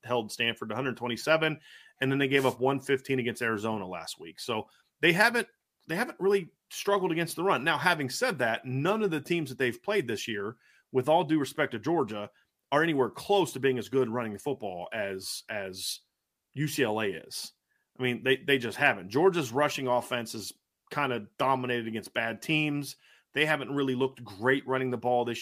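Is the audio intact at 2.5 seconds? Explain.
No, 2.5 s falls inside a wireless microphone noise hit running from about 2.34 to 2.56 s. The FM radio link fades as reflected signals cancel, so receiver noise swells up over the speech as a short swish of static.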